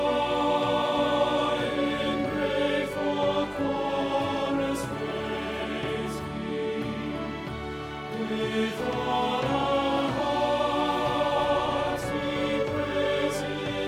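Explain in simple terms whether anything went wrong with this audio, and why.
Nothing went wrong here; there's nothing in this audio that sounds broken, skipped or out of place at any point, so there's no problem to explain.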